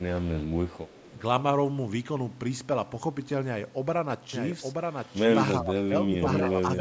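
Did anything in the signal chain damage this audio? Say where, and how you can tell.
Yes. Echo leak, 0.69 to 1.15 s, in call processing: a faint copy of the speech, around 25 dB below it, trails the original by 309 ms. The delay points to a far-end echo canceller that likely left some loudspeaker pickup in its microphone signal.

Speech suppressed in double talk, 5.6 to 6.53 s, also in call processing: the speech level drops in pieces by as much as about 15 dB, about half a second in total. This suggests the echo canceller mistook overlapping talk for echo and attenuated it.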